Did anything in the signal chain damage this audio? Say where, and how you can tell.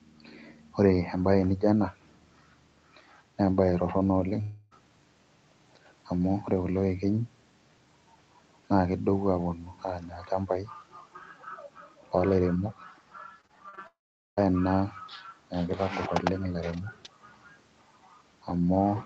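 Yes. Long network dropout at 4.41 to 4.73 s and again at 13.87 to 14.39 s, at the network stage. The first hole is 0.3 s, bridged entirely by a stretched, fading continuation of the preceding sound, with no true silence. The second is 0.5 s; concealment buzzes briefly, then about 0.43 s of near-silence follows before audio resumes with that half-second gone. The likely cause is a burst of packets that never reached the receiver.

Repeated packet loss (robotic sound) from 13.41 to 13.79 s, also network-side, just before the second dropout. Four short holes, the longest 40 ms and about 0.1 s in total, each patched by repeating the last fragment, so roughly a quarter of that span is synthetic. The rapid patch-gap-patch alternation gives a choppy texture through the 8 kHz-limited Opus call path.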